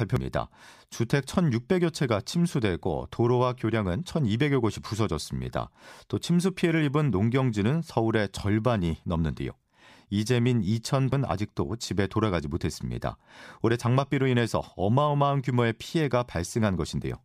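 Speech with damaged data in a compressed stream at 0.16 s and 11.12 s: corrupt bytes make the decoder misread frames and resynchronise, giving brief chirps or blips.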